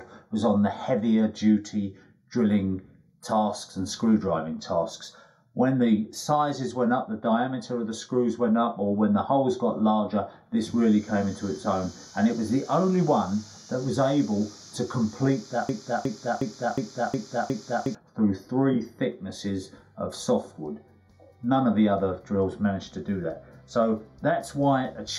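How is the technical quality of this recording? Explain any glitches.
The recording has two problems: a hollow, phasey colouring that runs through the whole clip, and a broken-record loop in the later part.

The channel delay (comb filtering) lasts from start to finish. One channel runs around a fifth of a millisecond behind the other, and when the two are summed to mono, shared content cancels at evenly spaced frequencies. The first notch sits around 3 kHz. That gives the audio its hollow, phasey tone. A plain treble cut or a muffled mic would only darken the top evenly. These notches stay fixed at the same frequencies whatever is playing.

The broken-record loop runs from 15.69 s to 17.95 s. A 0.36 s fragment plays six times back to back, each repeat identical, and whatever should have played in those two-odd seconds is lost. This is likely a stall in the player, encoder or stream, which kept sending the last fragment it held. 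A stutter or dropout would give a brief skip or a gap. Here the same short piece returns exactly and rhythmically until playback moves on.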